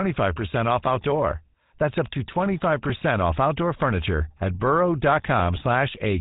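Speech with a buzzy, gravelly roughness over the whole recording, clearly audible from start to finish, with everything above 3.8 kHz gone so it sounds dull and narrow. This is the GSM full-rate codec: it rebuilds the voice from a vocal-tract model driven by a coarse, regularly spaced pulse excitation, which produces the grating texture, and the narrow bandwidth of this 13 kbps telephone codec removes the upper frequencies.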